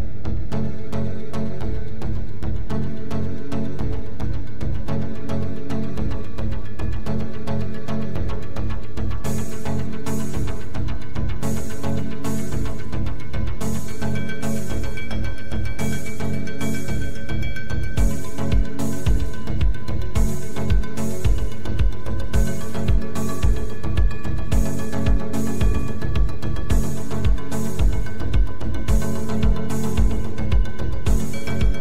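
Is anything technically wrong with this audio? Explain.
Yes, there's a DC offset running through the whole clip, from start to finish. The entire waveform sits shifted off the zero line by a constant amount, about -16 dBFS, so everything rides on that fixed level. You won't hear it as a sound in itself, but it eats into headroom on one side, making clipping come sooner, and it shows up as a steady spike right at 0 Hz at the very bottom of the spectrum.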